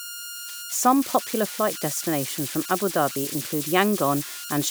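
Converter idle tones run through the whole of the speech. The delta-sigma converter appears to be working without dither, so when the input drops to low levels its modulator settles into repeating bit patterns instead of random noise. Those patterns produce a tonal whistle around 1.5 kHz, with its pitch set by the small DC offset at the input. The error sits at about 10 dB below the signal, so the whistle is heard in the pauses and turns into a grainy texture beneath the quieter speech.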